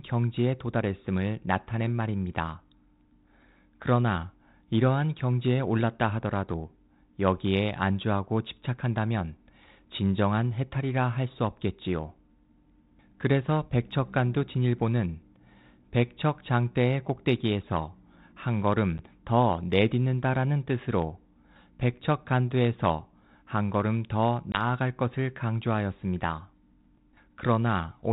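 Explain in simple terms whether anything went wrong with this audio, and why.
Packet loss on an ADPCM call at 18.98 s and 24.52 to 24.64 s: brief chunks of speech vanish into silence, and the decoder needs a moment to catch up, so sound returns slightly off.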